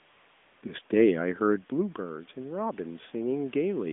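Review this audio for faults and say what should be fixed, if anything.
From 0 to 0.62 s the background is a steady, smooth hiss instead of the real room sound, and it switches off abruptly when the real signal returns. This is AMR comfort noise. For those first 615 ms the phone judged the talker silent and sent no speech frames, so the receiver generated synthetic noise from a rough estimate of the background's level and spectrum. Preventing it means setting the sender's voice activity detection less aggressively, or turning off discontinuous transmission, so that real frames keep flowing.

From 1.22 s to the end, the voice and room noise swell together over more than a second, ending up about 6 dB louder. This is automatic gain rising. The input fell by about 13 dB when the talker moved back from the microphone around 1.5 s, and the automatic gain control responded by slowly raising its gain to win back part of the difference. 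Preventing it means keeping a steady distance from the microphone, or limiting how far the control can raise its gain.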